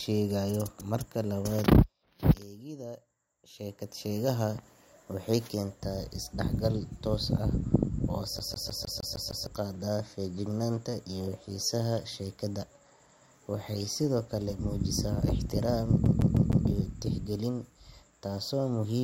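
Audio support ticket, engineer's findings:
CD stuck on one turn: speech stutters at 8.39 to 9.47 s (7 repeats) and 16.06 to 16.67 s (4 repeats). Same 154 ms slice replays each time with brief mutes at the jumps. Scratched disc kicking the laser back one track. Identical loop length in both events separates it from irregular buffer-repeat glitches.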